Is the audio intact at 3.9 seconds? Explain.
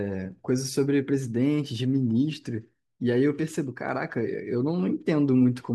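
No. At 3.89 s the speech carries a single sharp click, likely from dropped samples: a tiny fraction of a millisecond of the stream goes missing, so the waveform jumps to a later value. Unlike a dropout, no sound is lost; only that jump clicks.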